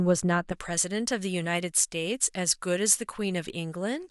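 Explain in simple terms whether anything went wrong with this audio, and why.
Pre-emphasis left on, from 0.52 s to the end: the treble was deliberately boosted when the speech was recorded or sent, but the matching cut that should undo it on playback never happened. So the highs stay too strong, making the voice thin, bright and hissy on s sounds.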